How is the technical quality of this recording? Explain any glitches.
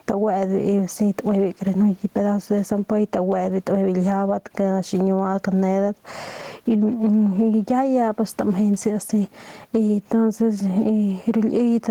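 The recording has one persistent fault, gain pumping, which runs through the whole speech clip. The room noise sits about 44 dB below the speech. The gain swings by about 10 dB. Loud and quiet passages end up squashed toward the same level. The likely cause is microphone gain set far too high, with a fast limiter or compressor clamping down on every loud sound and releasing in the silences.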